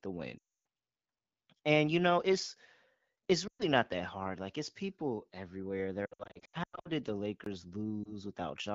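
Speech over a wideband AMR call, marred by lost AMR speech frames at 0.38 to 0.49 s, 3.47 to 3.66 s just before "not that hard", 6.06 to 6.89 s between "it's people everywhere" and "did the", and a brief dip around 8.04 to 8.12 s. Here the decoder fills each gap by stretching the last good sound with falling level, so the audio smears, warbles or fades to near silence. Over 6.06 to 6.89 s the losses come in short scattered runs. A separate block of digital silence at 7.44 s, right after "did the", is different: the output drops abruptly to silence for about 20 ms with no fade, which points to an output buffer not being filled in time rather than a decoding problem.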